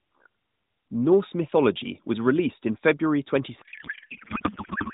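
From 3.62 s to the end, a codec payload misread takes over: the AMR decoder, only lightly coloured and band-limited until then, finds fields in the wrong places, which fits octet-aligned frames read as bandwidth-efficient. Unlike packet loss, the garbled warble never recovers.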